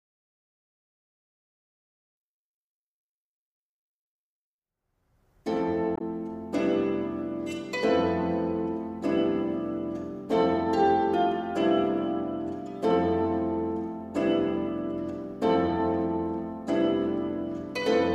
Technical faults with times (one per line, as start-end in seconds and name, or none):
5.94-6.01 damaged data in a compressed stream